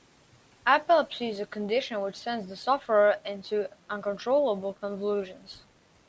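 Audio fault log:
No fault is heard in this speech clip.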